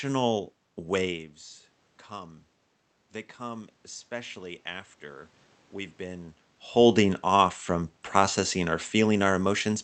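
From 3.37 s to 6.3 s, automatic gain rising can be heard. The speech level had dropped by about 15 dB at the microphone, shortly after the talker shifted position. The gain control judged the input too quiet. It raised its gain by about 4 dB, slowly, over roughly three seconds. Voice and room noise swell together as it climbs. The rise begins just before "holding off from processing".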